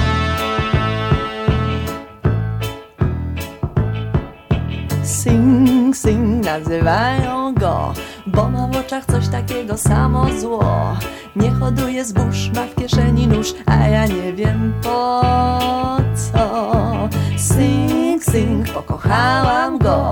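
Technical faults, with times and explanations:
No technical faults are audible; the signal stays continuous throughout.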